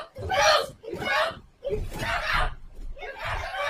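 From 1.06 to 2.43 s the sound turns rough and muffled, a call bitrate drop consistent with roughly 96 falling to 22 kbps for about 1.3 s.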